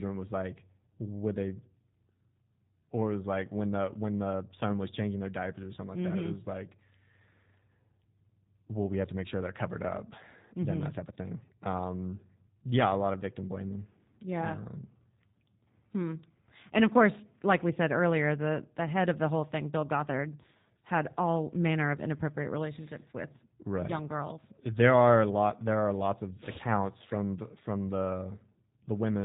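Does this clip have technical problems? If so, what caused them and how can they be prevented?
Yes. Throughout the speech, the G.729 codec is plainly audible: nothing passes above about 3.8 kHz, and the voice sounds rough and synthetic because it is rebuilt from a filter, pitch predictor and sparse pulses, which fits 8 kbit/s. Prevent it by recording or transmitting with a wideband, higher-bitrate codec.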